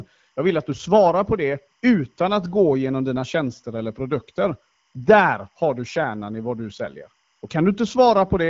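A faint chirping warble near 1 and 2 kHz runs behind the speech throughout. This is timecode bleed, 25-frame linear timecode leaking in from a neighbouring track or cable.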